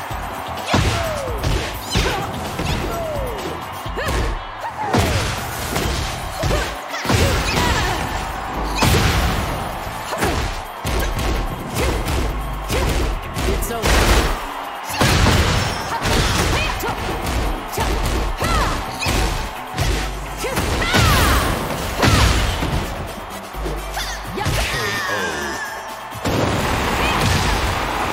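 From 19.94 s to 25.70 s the playback path suffers periodic USB or driver dropouts: something stalls the USB transfer or the audio driver every 0.125 s, and each time roughly a millisecond of audio never arrives and is replaced by silence. Those tiny gaps land eight times a second, around fifty in all, and each one snaps the waveform to zero and back, producing a steady train of ticks that rides on top of the sound until the stretch ends.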